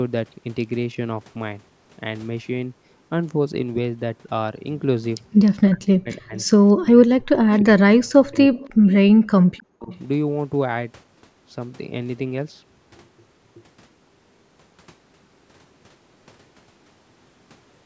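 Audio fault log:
5.45–5.51, 6.38–6.46, 8.55–8.93, 9.57–9.97 s, echo leak: a faint copy of the speech trails about 310 ms behind, roughly 25 to 30 dB down, likely from a loudspeaker echo the far end's canceller missed.
5.65–6.34, 6.8–7.27, 7.6–8.54, 9.69–9.9 s, speech suppressed in double talk: the talker drops out in chunks, as much as 35 to 40 dB, likely because the canceller can't separate them from the other side talking at the same time.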